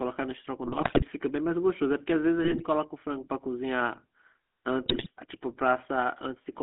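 From start to end the speech carries GSM full-rate codec damage, confined to a 200 Hz to 3.5 kHz line band. The pulse-driven excitation leaves a buzzy, gravelly roughness, which fits the 13 kbps full-rate coder. This grit is what separates it from a merely band-limited telephone line. GSM bit errors then strike from 0.64 to 1.04 s, 2.44 to 2.64 s and 4.86 to 5.07 s. Corrupted filter, pitch and gain values distort frames into squawks, pops and gargling.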